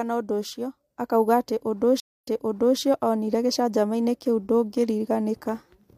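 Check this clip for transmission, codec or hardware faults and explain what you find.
One transmission fault. Stream reconnect, 2.0 to 2.79 s: right after "atĩ ũndũ" the connection drops, leaving about 0.23 s of silence, then a fresh decoder restarts mid-stream from a resent burst, so the speech resumes about 0.56 s earlier, repeating material, and fades in over its first frames.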